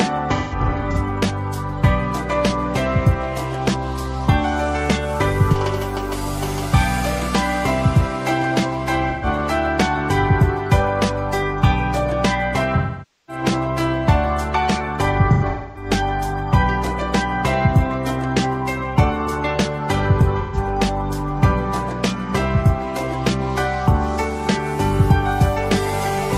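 AAC frame loss with concealment hits five times: 0.35–0.96 s, 9.10–9.26 s, 12.77–13.43 s, 15.33–15.90 s and 20.40–20.57 s. The decoder patches each gap from the last good spectrum, giving brief smeared, phasey stretches.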